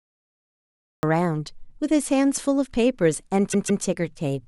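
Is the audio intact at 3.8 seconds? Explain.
No. Repeated frames run from 3.52 to 3.83 s. A 157 ms block plays twice more, stuttering and adding 313 ms.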